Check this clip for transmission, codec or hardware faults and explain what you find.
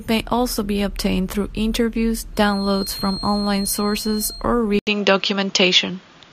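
Two faults stand out in this speech recording: a feedback whistle in the middle and a drop in input quality near the end.

From 2.31 to 4.47 s, just after "be obtained through interviews", a thin, steady whistle at 4.2 kHz sits about 10 dB below the speech and swells and fades slowly in level. The likely cause is a loudspeaker-to-microphone loop held right at the edge of feedback, so one frequency rings on without building up. On a spectrogram it shows as a single bright horizontal line at 4.2 kHz spanning those two seconds.

At 4.79 s the audio cuts out for 80 ms, then returns duller and more boxed-in until the end, with the level shifted by about 5 dB and a new noise floor around 40 dB below the speech. This points to the input switched to a poorer device, likely a different microphone or a headset's call profile with a narrower passband. On a spectrogram, energy above 7.2 kHz vanishes abruptly after the switch, leaving a flat ceiling. 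The waveform shows a short flat gap at the switch and a different overall envelope height afterward.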